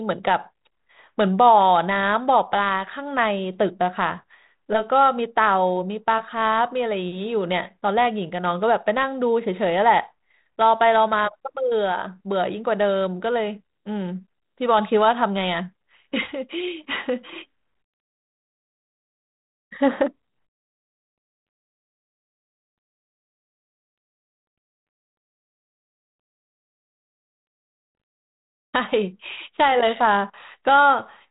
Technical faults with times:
none

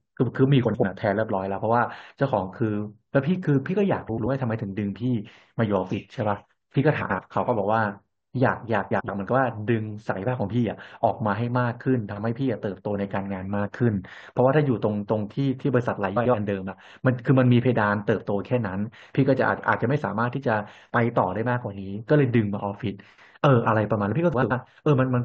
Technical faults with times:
0.65-0.84 frames out of order
4.08-4.26 frames out of order
7.01-7.19 frames out of order
8.91-9.09 frames out of order
16.16-16.35 frames out of order
24.34-24.51 frames out of order

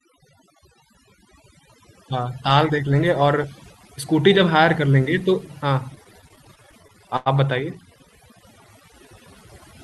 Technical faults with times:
0.00-9.84 overdone noise removal
5.95-7.28 repeated stalls (stutter)

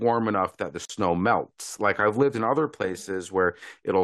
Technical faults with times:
0.85-0.89 gap at a join of encoded pieces

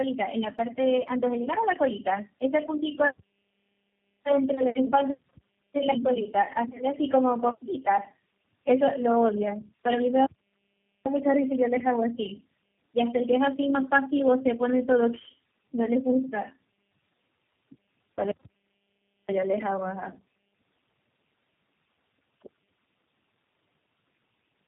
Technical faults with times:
0.00-24.67 tandem speech coding
10.26-11.06 playback stall

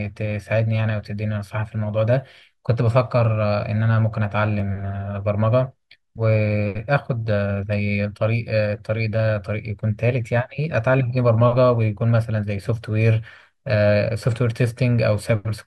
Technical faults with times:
4.60 block of digital silence

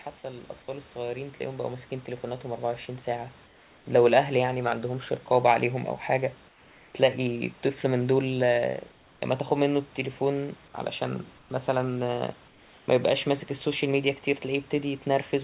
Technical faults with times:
0.21-5.94 automatic gain rising
3.46-3.86 comfort noise in place of the background
6.48-6.94 comfort noise in place of the background
8.92-9.22 comfort noise in place of the background
11.38-11.50 comfort noise in place of the background
12.48-12.88 comfort noise in place of the background

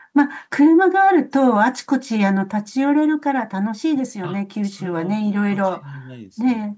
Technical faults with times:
none

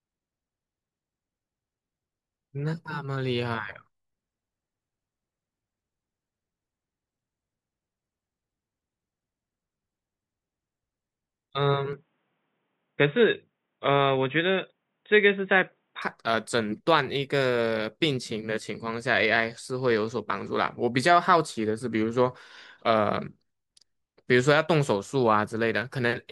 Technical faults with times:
11.93-16.02 input switched to a poorer device

